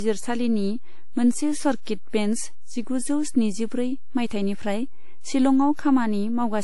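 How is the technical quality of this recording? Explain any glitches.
Two faults are present throughout this speech clip. A DC offset shifts the waveform off zero for the whole clip. It is inaudible, but it wastes headroom and leaves a steady component at the very bottom of the spectrum. Transcoding between lossy codecs is the likely cause of the second fault. Nothing survives above 11.5 kHz, and layered compression artefacts are heard together in the speech. The sound fits an MP3 at around 48 kbit/s re-encoded as WMA at 96 kbit/s, with the first codec's low cut-off carried through.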